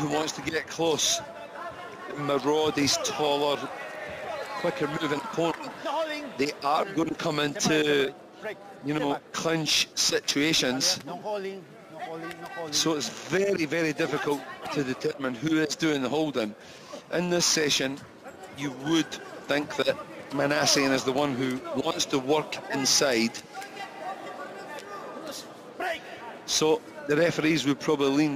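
Crude rate conversion runs through the whole clip. The sample rate appears to have been lowered by a modest ratio, which fits a 48 kHz to 44.1 kHz change, by simply keeping the nearest sample and dropping the rest rather than filtering and interpolating properly. The dropped samples repeat in a fixed pattern, so the error forms shifted, inharmonic copies of the sound itself, sitting roughly 20 dB below it. They come across as a gritty, inharmonic fizz that rides on loud and high-pitched passages.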